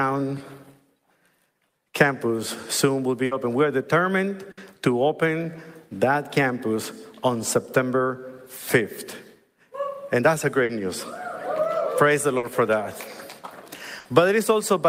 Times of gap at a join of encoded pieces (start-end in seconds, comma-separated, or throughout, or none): none